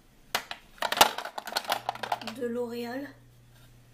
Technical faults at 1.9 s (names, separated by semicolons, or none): mains hum